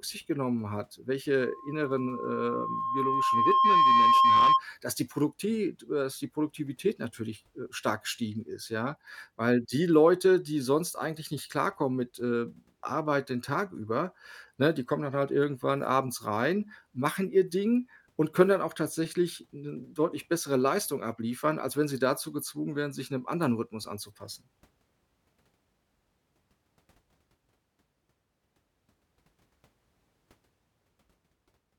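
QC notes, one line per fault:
1.40–4.65 s, loudspeaker feedback squeal: a steady 1.1 kHz tone swells over roughly two seconds until it sits about 10 dB above the speech. The microphone is hearing its own loudspeaker, and at that frequency the loop gain passes one, so the tone keeps feeding itself.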